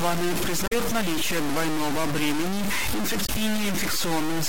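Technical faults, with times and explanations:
Throughout: low bit depth without dither. Harsh grain rides on the speech at roughly the level of the voice itself, with quiet stretches sputtering; likely truncation to about 3 bits.
0.64–0.73 s and 3.23–3.29 s: damaged data in a compressed stream. Brief glitches, before "наличие двойного бремени" and after it, where corrupted frames were misdecoded before resyncing.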